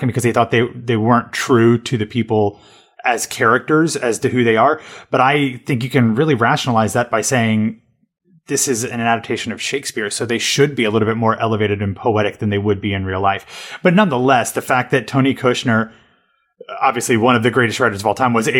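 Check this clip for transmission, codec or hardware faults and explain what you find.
One codec fault shows up in the speech. From 5.31 to 5.33 s, just before "think you can really", a chirp, squeak or blip cuts in: a corrupt frame decoded. Flipped bits in a couple of compressed frames misplaced energy across frequencies, peaking around -15 dBFS.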